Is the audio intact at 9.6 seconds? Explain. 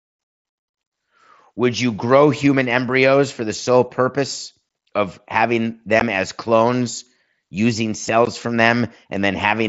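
Yes, the speech at 9.6 seconds is intact, with nothing breaking into it at that moment.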